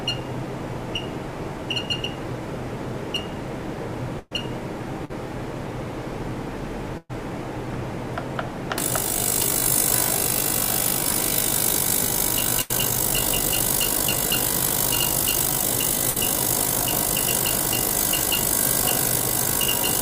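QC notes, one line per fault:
4.19–4.33 s, 5.05–5.11 s, 6.97–7.11 s, 12.61–12.71 s, 16.09–16.17 s, burst of packet loss: each time the sound smears into a held, fading tail before picking up later, with 120, 40, 120, 80 and 60 ms of audio gone. Consecutive packets went missing, and the receiver stretched the last good audio and faded it to cover the gap. At 4.19 and 6.97 s that fill runs out into 10 and 30 ms of silence before the audio resumes.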